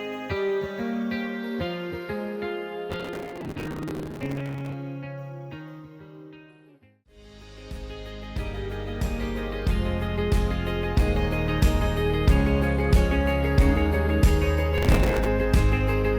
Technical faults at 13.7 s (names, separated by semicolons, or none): none